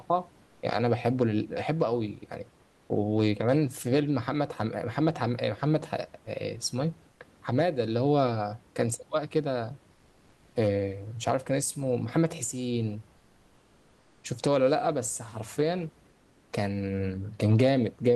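Speech with comfort noise in place of the background at 0.45–0.61, 2.63–2.89, 7.11–7.19, 9.93–10.55, 13.17–14.23 and 16.09–16.49 s. The room noise gives way to steady, featureless hiss about 1 to 3 dB quieter, likely from Opus DTX. Unlike a gate or dropout, the pauses never go fully silent.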